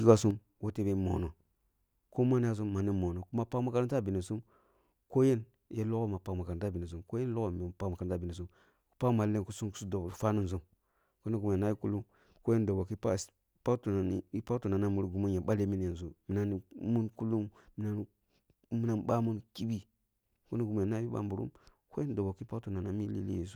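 Speech, where one channel drops out at 0.31 s and never returns, most likely a lost stereo channel before the mono fold-down. The level falls abruptly by about 6 dB, visible as a sudden step down in waveform amplitude and a uniformly dimmer spectrogram from there to the end.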